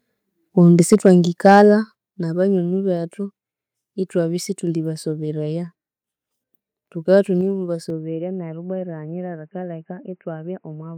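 From 0.79 to 1.12 s and again from 1.45 to 1.61 s, peaks hit the converter ceiling, about 3 dB and then about 2 dB over. Their tops are flattened into a harsh crackle. This is likely microphone overload.

At 0.94 s and 1.95 s the level drops abruptly, by about 2 dB and then about 6 dB. The microphone volume was likely stepped down during and after the distorted peaks.

From 7.90 s to the end the speech turns dull and boxy. There is no gap and little level change, but a faint new noise floor appears, roughly 50 dB down. The input was likely switched to a poorer device.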